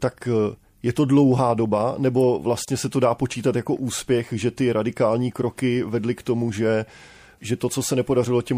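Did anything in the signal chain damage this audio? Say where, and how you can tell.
Yes. Throughout the speech the sound is watery and swirly, with chirpy sibilants and a dulled top end, plainly audible damage at the codec stage. The likely cause is MP3 compression at about 64 kbps, where the encoder cuts the treble and drops weak frequency lines frame to frame.

At 2.65 s a gap at a join of encoded pieces opens, a 28 ms gap with smeared edges before the sound resumes where it left off. Separately encoded segments were spliced untrimmed, keeping encoder delay and end-frame padding.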